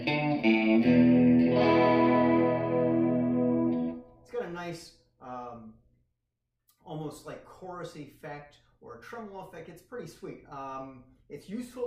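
Nothing here sounds technically amiss; the audio runs along without any fault catching the ear at any point.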